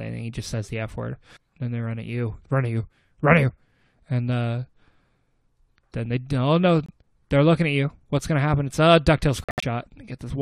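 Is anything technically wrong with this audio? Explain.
Yes, the clip shows two kinds of damage to its compressed frames.

Corrupt frame decoded, at 0.63 to 0.68 s: flipped bits in a compressed frame went unnoticed, and the decoder reconstructed it from wrong gains and misread codes. Energy lands at frequencies the original never had for about 50 ms, which points to roughly two frames. It comes through as a short, faint chirp or blip around about -40 dBFS, foreign to the surrounding sound.

Corrupt frame muted, at 6.86 to 6.91 s and 9.44 to 9.64 s: here the decoder rejected the damaged frames, and the player substituted silence. The first hole lasts about 44 ms, which fits a single frame. The second lasts about 0.2 s, which fits about eight consecutive frames. Both dropouts cut in abruptly, and the timing of the sound on either side stays intact.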